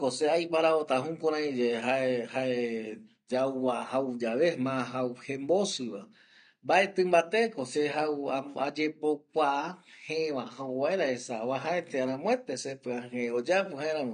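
From start to finish the speech sounds dull and smeared, with a fizzy, warbling texture on sibilants and nothing above 9.8 kHz. This is likely AAC compression at a low bitrate, around 32 kbps AAC-LC, which removes the top band and starves the remaining frequencies.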